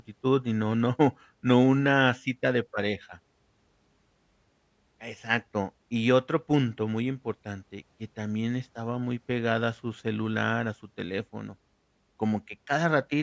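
No audible technical faults.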